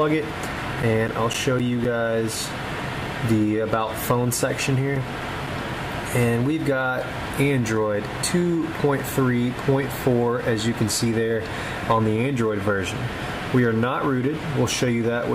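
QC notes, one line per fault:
0.32–2.35 s, CD scratch ticks: nine ticks at roughly four a second, the longest around 10 ms. A scratch is wiping out more data than error correction can rebuild once per disc turn, so the player interpolates or mutes those samples.
4.19–6.23 s, CD scratch ticks again: another nine at the same steady rate, the longest only about 5 ms. Same once-per-revolution damage, with the player patching over the lost samples each time the bad spot passes.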